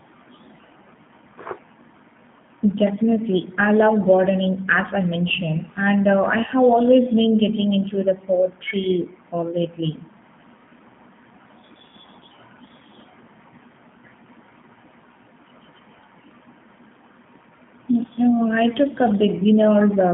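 Throughout this speech clip the sound is thin, slightly rough and synthetic, with a band confined to roughly 150 Hz to 3.5 kHz and plainly audible coding artefacts. This is G.729 codec damage, consistent with 8 kbit/s G.729A, which rebuilds speech from a vocal tract model and sparse pulses.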